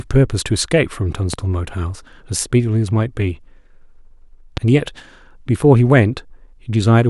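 Loud pops at 1.34–1.36 s and 4.57–4.59 s, each a single sharp spike roughly 10 dB above the speech, likely a voltage transient from a switch, plug or static discharge.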